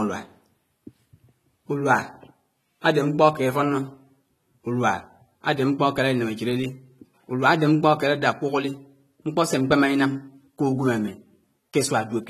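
From start to finish the speech sounds dull and smeared, with a fizzy, warbling edge on sibilants and nothing above 14 kHz. This is likely AAC compression, a low-bitrate AAC-LC encode, around 32 kbps by the sound, lowering its cut-off and thinning the spectrum.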